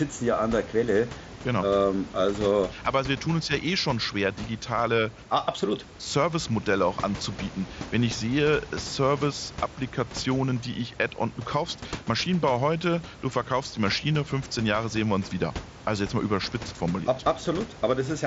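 No technical faults can be heard anywhere in the recording.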